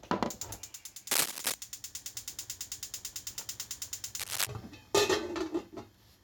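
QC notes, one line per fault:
1.10–1.55 s and 4.19–4.47 s, cable scratch noise: Dense, uneven bursts of scratching and rustling sit over the sound. The first burst runs about 0.45 s and is about 5 dB louder than the sound itself. The second lasts under 0.3 s and is at roughly the same level. The noise is ragged, not steady. That points to a contact whose resistance jumps about quickly, most likely a worn cable, connector or control being moved.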